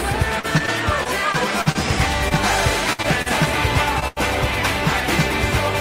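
From 0.39 to 1.77 s there's repeated packet loss, eight gaps of up to 43 ms each patched by extending the last sound, so it turns choppy with pieces missing. Short concealed packet loss follows at 2.29 s, 3.02–3.06 s, 3.22–3.28 s and 4.00–4.03 s, each a brief smear or wobble where a few hundredths went missing. Two bursts of packet loss, at 2.93–3.00 s and 4.08–4.18 s, drop about 60 and 80 ms, heard as a held buzz or fading hiss before the sound resumes further on.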